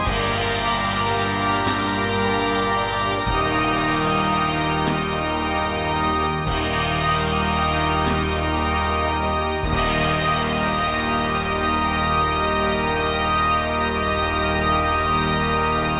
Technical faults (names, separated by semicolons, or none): none